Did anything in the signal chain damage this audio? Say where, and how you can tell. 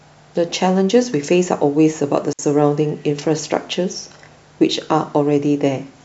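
Yes, there's a digital wireless dropout on the radio link at 2.33 to 2.39 s. The speech drops into a clean 60 ms hole of near silence with no noise burst either side. That's the receiver losing too much data and muting with a very fast fade.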